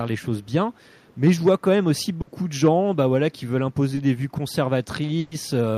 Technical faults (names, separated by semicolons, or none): echo leak; burst of packet loss; short concealed packet loss